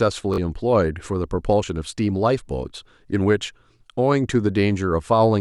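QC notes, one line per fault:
0.34 to 0.38 s, Bluetooth stutter. The speech breaks into a brief, rapid repeat, heard as a short buzzy stutter. The wireless link failed to deliver audio in time, so the receiver kept replaying the last slice it held. About 40.6 ms of real audio never arrived, which fits two lost packets. When data resumed, the speech picked up further along, so that stretch is simply missing.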